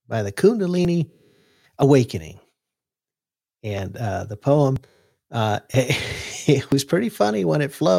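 Short skips cut into the speech at 0.85, 1.83, 3.79, 4.76, 5.74 and 6.72 s. Each is audio missing between chunks. A sliver of roughly 20 ms vanishes, and the sound on either side is butted straight together. There is no silence in the gap, just a sudden jump forward. The skips fall about one second apart, except for a two-second gap between 1.83 and 3.79 s. That spacing suggests the likely cause: a recorder or processor working in one-second chunks and dropping a little audio at each handover.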